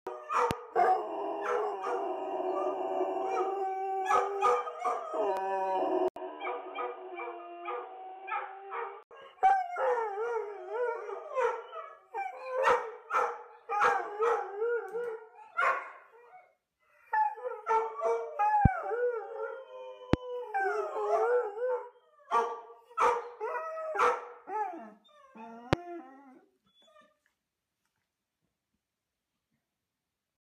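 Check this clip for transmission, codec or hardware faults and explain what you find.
Two kinds of fault turn up: four loud pops, and one stretch where the input switched to a poorer device.

The loud pops fall at 0.51–0.53 s, 18.65–18.68 s, 20.13–20.16 s and 25.73–25.75 s. Each is a single sharp thump, about 20 dB above the signal for the first and about 25 dB for the rest, likely from a voltage pulse such as a plug, switch or static discharge. Unlike a dropout, the sound carries on underneath each pop.

From 6.08 to 9.11 s the input switched to a poorer device. An 80 ms silence marks the cut. After it, nothing above 3.8 kHz gets through, the level falls by roughly 10 dB, and a new noise floor sits about 30 dB below the signal, so the sound turns dull and boxy. This is likely a change to another microphone or a headset's call profile. A simple low-pass filter would not bring that gap, level step and different background noise along with it.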